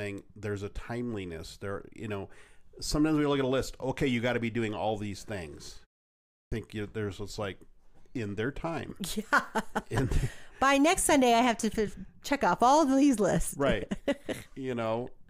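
At 6.12 s, after a 0.34 s pause, a clipped start after a pause removes the opening 0.40 s of speech, until 6.52 s. The idle output device wakes late, so speech bursts in abruptly, already under way. Muted pauses would silence only the gap and lose no speech.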